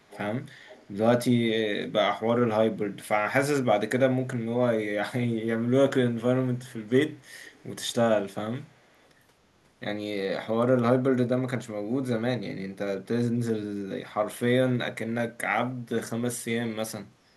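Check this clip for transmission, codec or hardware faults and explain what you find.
The speech carries an echo leak in five short bursts: 0.03–0.19, 0.65–0.91, 6.71–6.92, 7.43–7.67 and 8.62–9.07 s. A faint copy of the talker returns 269 ms late, clearer early on and barely audible later. This likely comes from a far-end loudspeaker whose echo canceller let some pickup through.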